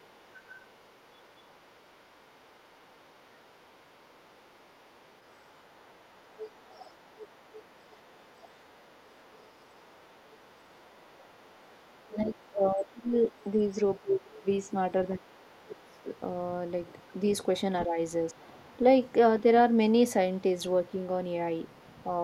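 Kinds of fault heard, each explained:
Other side's voice leaking through: an echo canceller that likely failed to remove loudspeaker pickup from the microphone lets the far talker into the speech, faint at about 30 dB down through 0 to 14.72 s, strongest at about 20 dB down from 15.86 to 17.84 s, with fainter scraps near 19.1 s and from 20.94 to 22.07 s.
Speech suppressed in double talk: with both sides talking at once, the echo canceller likely could not tell its own talker from the echo and turned everything down, so between 10.76 and 18.63 s the speech dips in pieces, by up to roughly 20 dB, for about three seconds in all.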